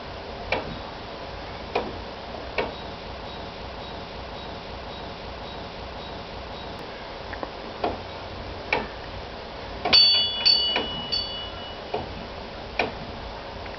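From 3.26 s to 6.79 s the audio falls into a broken-record loop. A fragment of about 0.55 s plays six times back to back, each pass identical. The likely cause is a stalled player, encoder or stream that kept resending the last piece it held, so the audio due in those seconds never arrives. This differs from a stutter or echo because the repeats are exact and sustained rather than brief or decaying.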